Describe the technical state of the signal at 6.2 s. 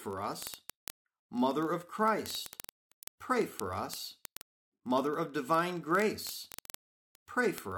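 At 6.2 s the speech is carrying word clock ticks, which run from 0.11 s to 7.76 s. The receiving device is clocked on its own, out of step with the sender by roughly a thousandth, so about every 20 ms a sample is dropped or repeated. That makes a fast, steady train of sharp ticks of uneven strength. Unlike buffer dropouts, they leave no audible gaps and never break their even rhythm.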